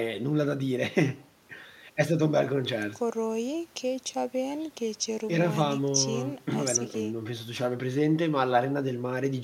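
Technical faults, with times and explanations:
No technical faults can be heard in this speech recording. Nothing in the audio points to a problem at any point.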